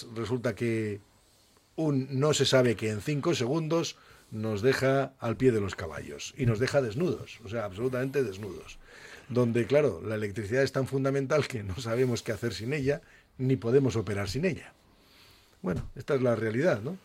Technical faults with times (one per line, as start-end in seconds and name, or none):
none